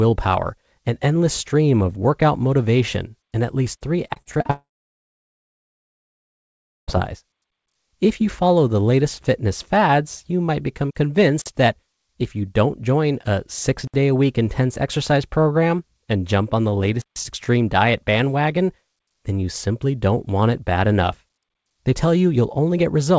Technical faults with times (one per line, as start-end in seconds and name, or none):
4.08-4.51 repeated packet loss (robotic sound)
4.51-6.90 long network dropout
11.42-11.46 block of digital silence
13.87-13.94 block of digital silence
17.02-17.16 block of digital silence